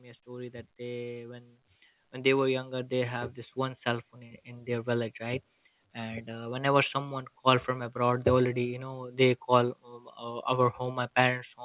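Speech, with automatic gain rising from 0.23 s to 7.23 s: the level climbs steadily by about 14 dB over those seven seconds as the gain control, judging the input too quiet, keeps turning itself up. Background noise swells right along with the voice, which separates it from a talker leaning toward the microphone, where only the voice would grow. The band stops at 4 kHz throughout, consistent with G.711 A-law on the call path.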